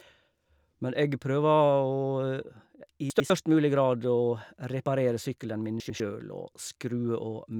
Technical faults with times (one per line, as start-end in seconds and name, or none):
3.10-3.30 chunks out of order
5.80-6.00 chunks out of order